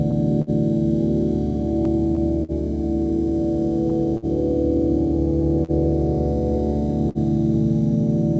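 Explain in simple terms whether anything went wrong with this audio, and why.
Several things went wrong with this music, all related to timing rather than lost sound.

Throughout the clip there is clock drift between sender and receiver. The sending device's clock runs roughly 3% slow, so music arrives a little slower than the receiving end plays it. The receiver's waiting store of audio keeps running low, and small timing hiccups recur across the whole clip. That steady, clip-wide pattern is what separates drift from a single one-off delay.

At 0.42 s, 4.17 s, 5.64 s and 7.09 s you hear a short stall from a late packet. Each time, a piece of audio wasn't ready when it was due, so the receiver held the last sound for about 50 ms, roughly a twentieth of a second, then carried on from exactly where it stopped. Nothing is skipped. The music just hangs briefly, sometimes with a slight buzz.

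From 1.85 to 2.52 s there are repeated stalls (stutter). Instead of one hold, the audio stops three times in quick succession, the longest pause about 50 ms and about 65 ms in total. Again nothing is lost, but the passage drags and hiccups. The clustering of several holds close together distinguishes this from the isolated single stalls.

The call path itself carries the music normally, with nothing above 8 kHz, so the top end sounds a bit dull.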